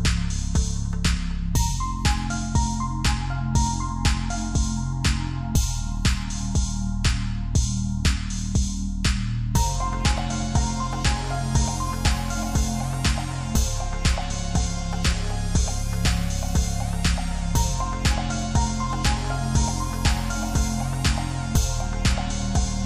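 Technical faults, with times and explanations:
The audio has no technical faults. Nothing in it needs a time or an explanation.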